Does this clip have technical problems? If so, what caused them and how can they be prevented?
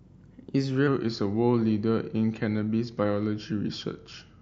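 Yes. From 0.87 s to the end at 4.42 s, the speech has a wrong sample rate: it plays slower and lower, at 0.919 times normal speed and about 1.5 semitones down. This fits 48 kHz audio being played at 44.1 kHz without conversion. Unlike a pitch shift or a time-stretch, pitch and tempo drop together by the same ratio. To prevent it, resample to the device rate or tag and honour the file's true rate.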